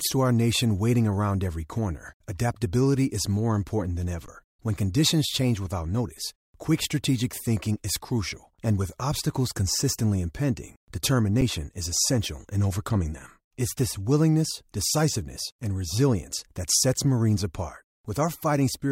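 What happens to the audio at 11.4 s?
At 11.41 s, just before "is essential in overcoming", an underrun with held sample freezes the output for about 8 ms: the buffer empties and the converter holds its last value. The waveform shows a flat plateau and the spectrogram a brief blank strip. Roughly 7 ms of audio is lost before playback resumes.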